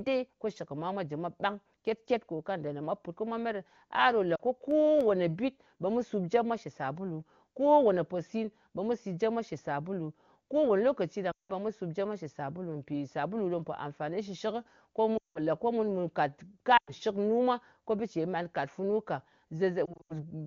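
At 4.35 to 4.41 s, lost AMR speech frames leave a 40 ms gap. The decoder repeats its last pitch and vocal-tract settings at falling gain, so the sound gives a brief warble instead of a hard cut.

From 4.71 to 5.59 s come CD scratch ticks: four sharp clicks, each under a millisecond. These are unrecoverable disc errors that were interpolated or muted, recurring at a rotation-like interval. They are hard points rather than the smeared, tonal stretching of concealment.

Longer frame losses follow at 11.31 to 11.53 s and 15.17 to 15.39 s (180 ms each), and at 16.77 to 16.91 s (100 ms). In each, the sound drops to near silence within two frames before returning weak. At 19.85 to 20.14 s the losses scatter over 240 ms in runs of up to 80 ms, giving repeated stuttering dips.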